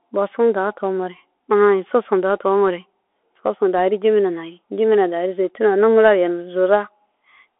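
From start to finish the speech runs through a Bluetooth CVSD headset codec. Nothing gets above 3.8 kHz, and the usable band sits at roughly 300 Hz to 3.4 kHz, so it has that boxed-in phone-call sound. CVSD codes each sample as a single up-or-down bit with an adapting step, which fits a 64 kbps link. The coding damage is plainly audible: grainy, roughened detail where the step can't keep pace with the waveform.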